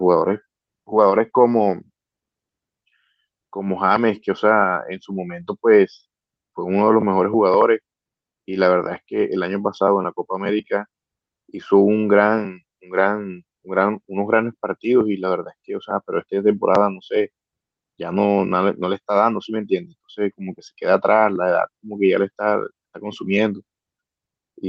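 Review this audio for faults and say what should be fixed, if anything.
No faults found; nothing needs fixing.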